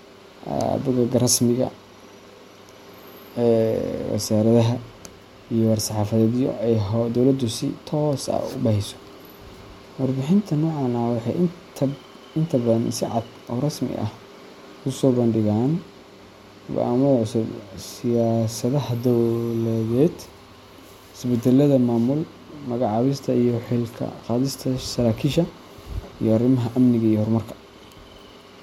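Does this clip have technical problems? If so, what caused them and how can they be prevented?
No, the speech signal shows no technical faults that a listener can pick out anywhere in the recording.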